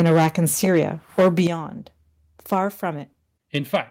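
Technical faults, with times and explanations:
0.00–0.27 s, microphone overload: The opening peaks sound harsh and crackly. They run about 8 dB past the converter's limit, and about a tenth of the samples are flattened. The likely cause is input gain set too high, so the converter cuts off the waveform tops.
0.02 s, microphone volume stepped down: The level drops suddenly by 4 dB, right inside that distorted start. Voice and background fall together. The software likely lowered the device's input volume in one step after detecting clipping.
1.18–1.41 s, microphone overload: A second stretch of crackling edge appears, the worst in the clip, at about 10 dB over the limit. Roughly a tenth of samples are clipped. The likely cause is still too much input gain for the converter.
1.47 s, microphone volume stepped down: Just after that burst, everything drops by 9 dB at once. This is a much bigger step than the first. 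It likely reflects another one-step cut to the input volume in response to the clipping.
3.55–3.76 s, microphone overload: Near the end, a milder roughness appears, only about 3 dB over. A small fraction of samples are clipped. The likely cause is a loud peak still exceeding the converter's range.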